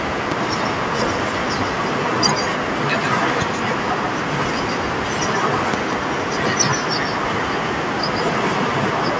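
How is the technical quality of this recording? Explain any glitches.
The recording has two problems: a constant echo on the speech and five loud pops.

Echo with no canceller runs through the whole clip. Every phrase is followed, roughly 150 ms later, by a copy about 7 dB quieter that sounds thinner. The far end is playing the call through a loudspeaker, and its microphone is sending it straight back with nothing to cancel it. Room reverberation smears continuously, but this is a distinct, delayed repeat of each syllable, so it reads as a separate voice trailing behind.

Loud pops occur at 0.32 to 0.34 s (a single pop), 3.30 to 3.44 s (two pops in quick succession) and 5.74 to 5.95 s (another pair, the strongest). They peak roughly 15 dB above the speech, and the last reaches about 20 dB. Each is a sharp electrical spike, most likely from a voltage transient such as a plug, switch, static discharge or driver glitch. 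The speech continues underneath without interruption, which separates these pops from dropouts or clipping.

The call microphone processing leaves nothing above 8 kHz and trims the lowest bass. That is expected for this kind of path and is not a fault.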